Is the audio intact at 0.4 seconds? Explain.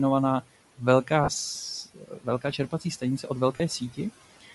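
No. At 0.4 s, as throughout the clip, noise suppressor artifacts are present: the room noise, about 19 dB below the speech, is pulled down by about 15 dB frame by frame, so it sinks between the words and rises under them. The speech also carries a breathy, grainy edge with noise-filled highs, most likely from Bluetooth LC3 compression, which fits a 48 kbps stream coded in 10 ms frames.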